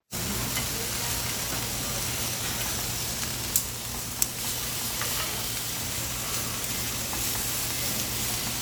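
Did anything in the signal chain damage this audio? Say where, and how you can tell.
No, nothing in the chain from capture through playback has audibly damaged this recording of sounds.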